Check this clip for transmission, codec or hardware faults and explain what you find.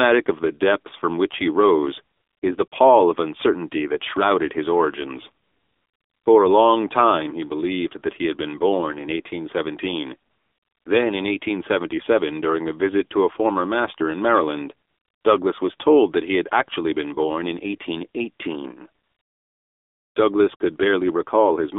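Two faults run through the speech. The whole clip went through a narrowband mobile codec, and its pauses are repeatedly filled with synthetic comfort noise.

AMR narrowband mobile codec (throughout): The speech sounds buzzy, thin and plainly synthetic. Everything is confined to roughly 250 Hz to 3.6 kHz. AMR-NB rebuilds the sound from a vocal-tract model fed with sparse pulses, and the plainly audible damage fits a mode of about 7.4 kbps.

AMR comfort noise (at 2.16–2.42 s; 2.68–2.72 s, right after "he rose is the"; 5.44–6.26 s, after "that shrouded his origins"; 10.30–10.86 s, before "then in"; 14.88–15.24 s; 19.04–20.16 s; 20.56–20.60 s): During each of these gaps, the real background gives way to a smooth, steady hiss that switches in and out. The phone judged the talker silent and stopped sending speech frames, so the receiver synthesised noise from a coarse level and spectrum description.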